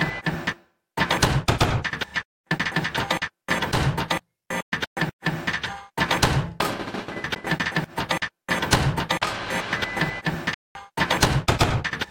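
At 10.54 s the sound cuts out abruptly and stays silent until 10.75 s, about 209 ms. It then picks up further along, as if it had kept playing. That's a Bluetooth dropout, most likely several packets not reaching the headphones in time and getting thrown away.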